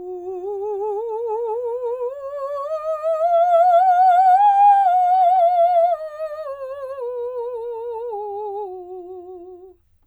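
No technical faults can be heard in this music.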